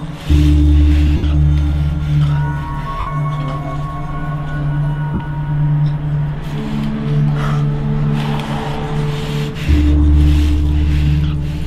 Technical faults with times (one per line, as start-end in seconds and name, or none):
1.17-1.23 lost LE Audio frames
3.00-3.07 lost LE Audio frames
5.14-5.20 lost LE Audio frames